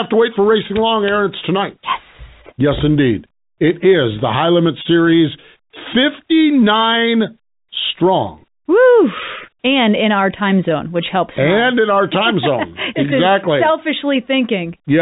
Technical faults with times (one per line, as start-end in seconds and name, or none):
none